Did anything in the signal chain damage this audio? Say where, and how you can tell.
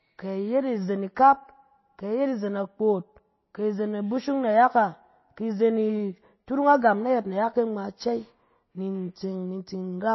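Yes, the codec stage: throughout, nothing sits above 5.8 kHz and the speech swirls watery, likely MP3 compression near 24 kbps, not a clean low-pass filter.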